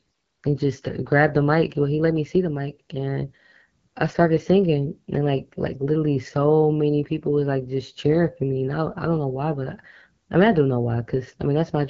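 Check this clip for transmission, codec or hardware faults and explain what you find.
One codec fault runs through the whole clip: AMR wideband (HD Voice) coding. The speech sounds rough and raspy, with plainly audible damage. Nothing remains above 7.3 kHz. The coarse vocal-tract model and noise-filled top band fit a low rate, near 8.85 kbit/s.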